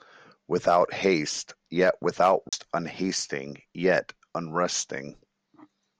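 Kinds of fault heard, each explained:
CD skip: at 2.49 s the speech cuts out for about 40 ms, then resumes from a different point, because the laser jumped to another turn of the disc's spiral and playback continued from there after a brief mute.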